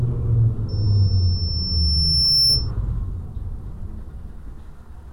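Loudspeaker feedback squeal runs from 0.68 to 2.71 s. A microphone here is picking up the loudspeaker it drives, and at 5.4 kHz the loop's gain rises above one, so that frequency feeds on itself. It appears as a single high-pitched tone that swells over roughly two seconds into a piercing squeal, ending up a few decibels louder than the sounds beneath it before it stops at 2.71 s.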